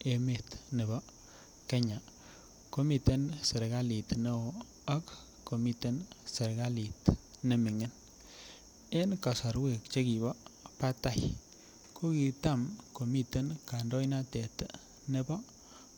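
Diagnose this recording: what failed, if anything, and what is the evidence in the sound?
Nothing failed: no stage of the chain leaves any fault audible in this speech recording.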